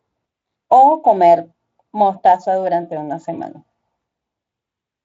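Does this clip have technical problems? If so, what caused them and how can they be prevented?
No, this clip has no technical problems.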